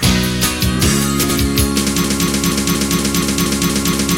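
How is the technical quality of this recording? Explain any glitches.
The recording has two glitches. Frames out of order at 1.23–1.36 s: two 64 ms blocks swap places, giving a brief garbled flutter. Unlike a loop, nothing repeats. A broken-record loop from 2.04 s to the end: a 0.24 s fragment repeats nine times exactly, likely from a stalled stream, and the audio for that stretch is lost.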